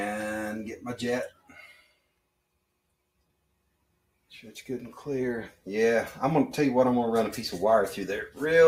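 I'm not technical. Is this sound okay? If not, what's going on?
No. A noise suppressor applied to music or sounds is treating steady tones and fading tails as noise, so the level pumps and thins throughout. There is also sound cut by the noise suppressor from 1.3 to 2.26 s and from 3.19 to 4.31 s, where held parts drop sharply.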